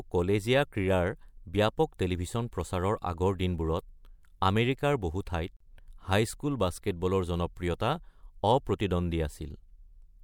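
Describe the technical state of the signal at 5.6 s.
At 5.57 to 5.60 s there's a gap at a join of encoded pieces: a 37 ms gap right after "আমেৰিকাৰ বহু", before "হাইস্কুল বাস্কেটবলৰ". Separately encoded roughly 10-second chunks were butted together untrimmed, so encoder delay and end padding sit there, giving a break with smeared edges before the speech resumes.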